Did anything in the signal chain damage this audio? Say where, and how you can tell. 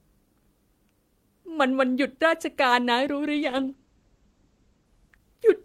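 Yes. Call bitrate drop at 3.35 s. The codec falls from 40 to 12 kbps. Speech turns coarse and muffled, with bandwidth narrowing from 20 kHz to 8 kHz.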